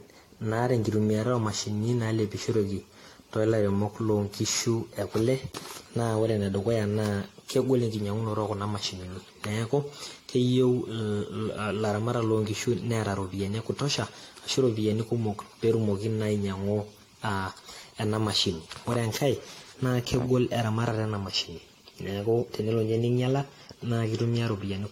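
Throughout the speech, the sound is swirly, smeared and hollow, with blurred attacks and nothing above 16.6 kHz. This is generation loss, likely from about five rounds of lossy encoding that points to AAC. Unlike one low-bitrate pass, the damage compounds beyond what the bitrate alone implies.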